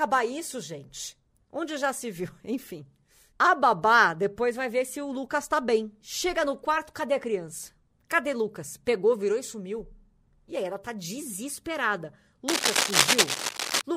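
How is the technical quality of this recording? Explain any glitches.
The speech carries one clear glitch near the end. From 12.48 to 13.82 s, cable scratch noise appears: dense, uneven scratchy rustling, roughly as loud as the speech. It is likely from a worn cable or connector being moved. It differs from steady hiss or isolated digital clicks by its irregular, clustered bursts.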